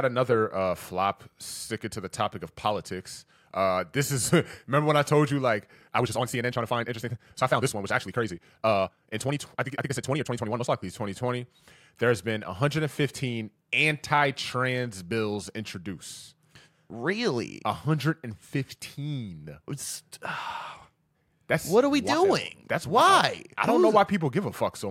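From 5.73 to 10.67 s the speech turns rushed at unchanged pitch, a time-stretched section, likely squeezed to about 1.76 times speed by dropping short pieces.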